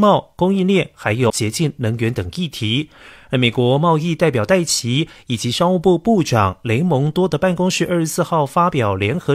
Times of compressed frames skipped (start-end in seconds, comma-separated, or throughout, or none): 1.26-1.32